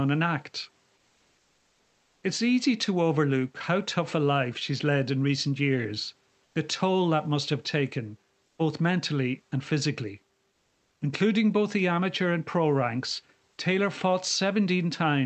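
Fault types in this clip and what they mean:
Comfort noise in place of the background: in the pauses after "an act" (0.97 to 2.21 s) and after "both mentally and physically" (10.51 to 11.01 s), and in short gaps near 6.45 and 8.45 s, the room background, about 45 dB below the loud speech, becomes a smooth, featureless hiss at about the same level or up to about 2 dB lower, likely generated by the receiver during discontinuous transmission. On a spectrogram the textured noise floor turns uniform. The waveform stays flat.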